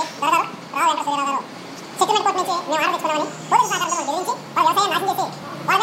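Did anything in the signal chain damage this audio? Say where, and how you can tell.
Yes. The fault is a wrong sample rate at the playback stage. Throughout, the sound runs twice as fast and sits 12 semitones, a full octave, too high. The samples were played without conversion at double their intended rate, which fits material recorded near 22 kHz being played at 44.1 kHz.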